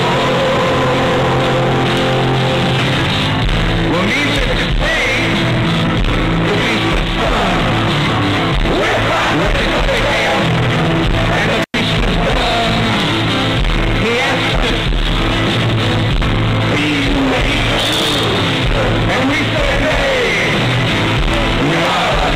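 At 11.63 s a loose connection in the signal path briefly opens, an intermittent contact that breaks the circuit for about 100 ms before the plug or cable seats again at 11.74 s. While the contact is open the sound drops out, and only faint hiss remains in the gap. The making and breaking of the contact adds a short crackle at each edge, so the dropout is bracketed by scratchy bursts rather than clean cuts.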